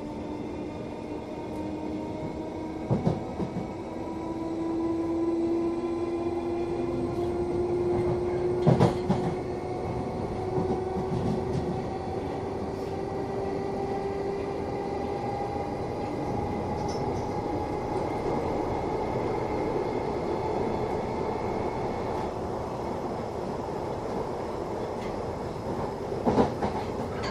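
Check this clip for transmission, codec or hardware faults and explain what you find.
Nothing in the clip points to a transmission, codec or hardware problem.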